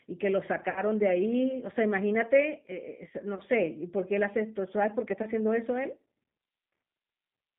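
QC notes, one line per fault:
throughout: G.729 codec. The audio is confined to roughly 150 Hz to 3.6 kHz, with a slightly rough, synthetic edge that fits 8 kbit/s G.729A. The sound is rebuilt from a filter, pitch predictor and sparse pulses, not merely filtered, so it has a grainy texture that plain band-limiting would not produce.
0.70–0.81 s and 3.35–3.40 s: VoIP packet loss concealed by the speech codec. About 60 ms goes missing at the first point, which fits three lost packets, and about 20 ms at the second. The decoder stretches its last pitch and filter into sound that fades. Unlike a plain dropout, there is no silent gap, and the distortion lingers briefly after the stream resumes.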